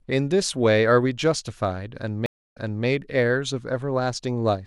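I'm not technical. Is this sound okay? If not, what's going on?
No. At 2.26 s the audio cuts out for about 0.28 s. That's a stream reconnect: the connection dropped, the player went quiet, then reconnected and restarted its decoding partway through the stream. When sound returns, the server has resent a short stretch, so playback picks up about 0.31 s earlier than where it stopped, and you hear a brief bit of speech again. The whole disturbance is over by 2.86 s.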